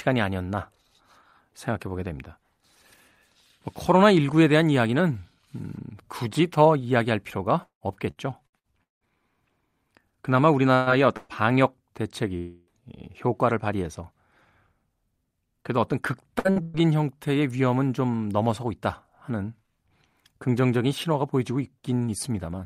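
From 7.63 to 9.04 s the speech turns choppy and robotic. This is repeated packet loss: five gaps, the longest 173 ms, each patched by stretching the previous sound. At 10.75–10.89 s and 11.17–11.32 s come brief held-over sounds, each a burst of packet loss where about 120 ms went missing and the last sound was extended and faded. From 12.37 to 12.70 s a longer stretch of continued sound fades without reaching silence, likely a long network dropout, with roughly 300 ms of speech lost and filled in. At 16.39–16.48, 16.51–16.59 and 16.62–16.82 s, three further bursts of packet loss in quick succession leave stuttering smears as 60, 60 and 120 ms of audio are replaced by continuation.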